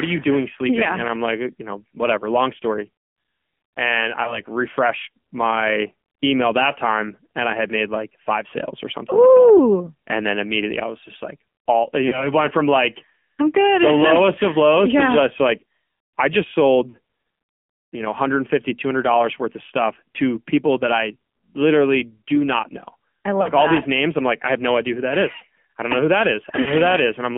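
Throughout, the speech carries the AMR narrowband mobile codec. The band is confined to roughly 200 Hz to 3.4 kHz, and the voice has a buzzy, synthetic edge that fits a low rate around 7.4 kbps. The vocal tract model is driven by a pitch predictor and a few pulses per subframe, which thins the detail. On a spectrogram, nothing appears above 4 kHz, and the harmonics look smeared and coarse.

Lost AMR speech frames interrupt the audio five times. The first comes at 4.24 to 4.41 s, where a brief dip and warble fit one missing 20 ms frame. The next comes at 12.08 to 12.32 s, after "just like all you" and before "went from like I'm". Then 16.90 to 16.97 s follows "just like I just". Another falls at 23.42 to 23.49 s, between "not know I love" and "that all these names". The last is at 26.62 to 26.71 s. In each gap, the decoder repeats the previous pitch and spectral shape at falling gain. The waveform shows a fading, repetitive stretch, and the spectrogram shows a frozen harmonic pattern dimming before speech resumes slightly rough.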